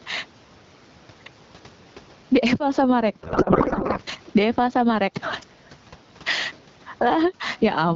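Throughout the clip there is gain pumping. The level swings by roughly 15 dB, and loud and soft parts end up closer together. The likely cause is input gain set far too high, with a fast limiter clamping it down. On a waveform the gaps fill in and the peaks sit flattened against one ceiling.

From 3.23 to 4.0 s a codec payload misread takes over. Octet-aligned AMR packets are being unpacked as bandwidth-efficient, so the decoder takes each field from the wrong bit positions. The speech becomes garbled noise and warble that barely tracks it. On a spectrogram the formant bands dissolve into smeared, patchy broadband texture, which stops abruptly at 4.0 s.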